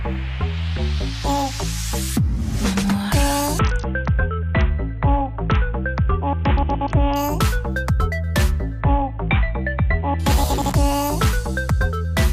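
From 3.59 to 7.16 s, and again from 8.81 to 10.19 s, the Bluetooth link falls back to a much lower SBC bit pool, a drop that sounds like a fall from around 28 to about 6, near 60 kbps. Starved of bits, the encoder leaves the upper sub-bands nearly empty and quantises the rest coarsely. Each time the treble dulls and a gritty, grainy noise rides on the sound until the rate climbs back.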